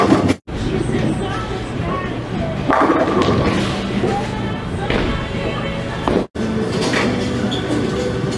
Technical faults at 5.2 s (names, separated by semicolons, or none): none